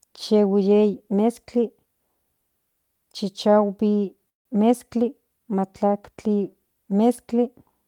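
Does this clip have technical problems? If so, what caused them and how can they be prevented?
Yes. Packets were likely delayed in transit, so the jitter buffer ran empty and a call audio freeze occurred from 4.29 to 4.47 s. The last sound trails off into about 0.15 s of silence, then the speech resumes where it stopped, nothing lost but everything afterwards running about 0.16 s late. A more stable network path, or an adaptive jitter buffer with more headroom, would prevent this.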